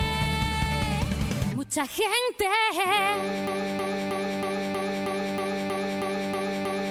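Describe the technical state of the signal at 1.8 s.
At 1.8 s the signal is intact, with no audible fault at that point.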